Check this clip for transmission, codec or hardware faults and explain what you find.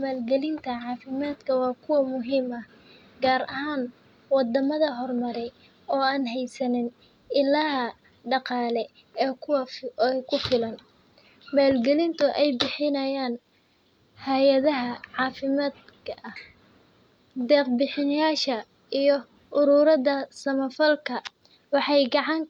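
Nothing in the speech points to a transmission, codec or hardware fault.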